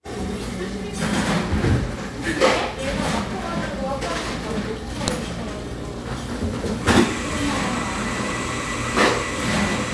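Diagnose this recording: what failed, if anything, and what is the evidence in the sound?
A storage-stage joining fault: a file header played as audio, where a second WAV piece was spliced in with its header bytes left intact and read as samples. The result is a single sharp, loud snap at 5.08 s, cutting across the sounds regardless of their level.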